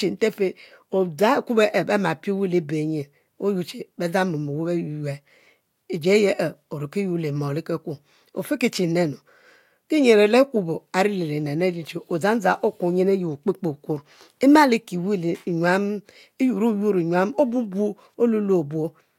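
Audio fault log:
No technical fault can be heard anywhere in this speech recording, and the signal holds steady throughout.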